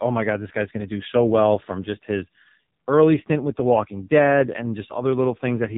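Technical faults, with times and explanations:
Throughout, AMR narrowband mobile codec: the speech sounds boxed-in, heavily buzzy and synthetic, with nothing above 3.8 kHz. The mobile codec rebuilds the voice from a vocal-tract model fed by sparse pulses, and damage this heavy points to a low mode near 5.9 kbps.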